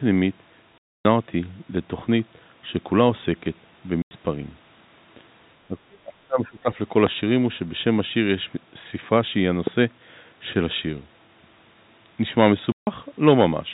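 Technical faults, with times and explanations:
0.79–1.05 s, 4.02–4.11 s and 12.72–12.87 s: packet loss filled with silence. The sound stops dead for 270, 90 and 150 ms with hard edges, all multiples of 30 ms, which fits 30 ms packets. Unlike a fade, the gaps are plain silence.
5.68–6.69 s: speech suppressed in double talk. For about a second the talker dips by up to about 30 dB, likely an echo canceller ducking while both sides spoke, not dropped packets.
7.07–7.09 s and 9.67–9.69 s: loud pop. Two single sharp pops sit about 15 dB and 10 dB above the speech, likely voltage steps from a plug, switch or static. The speech carries on underneath, unlike a dropout.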